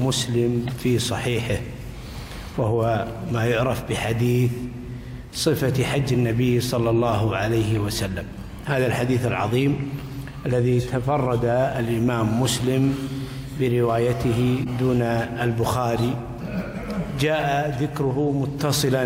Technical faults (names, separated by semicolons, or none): corrupt frame decoded